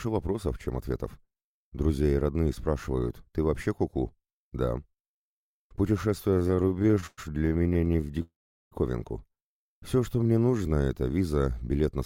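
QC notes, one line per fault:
6.31 to 8.22 s, repeated stalls (stutter): audio keeps halting and dragging as late packets empty the buffer, 36 gaps filled, longest about 112 ms.
8.22 to 8.73 s, call audio freeze: sound holds then drops to silence for about 0.4 s, likely a network hold-up draining the buffer, then resumes where it stopped.
9.68 to 10.84 s, jitter buffer slow-down: playback stretches to 87% speed at unchanged pitch, repeated pitch periods adding 161 ms to rebuild reserve.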